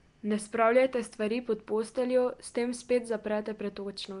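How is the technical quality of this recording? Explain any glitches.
The recording has one audible codec fault across its full length. Nellymoser compression, throughout: likely Flash's Nellymoser Asao codec, at a rate fitting about 44 kbps. Starved bands are noise-filled, and nothing passes above 10.6 kHz, giving the speech a rough, hissy, underwater smear.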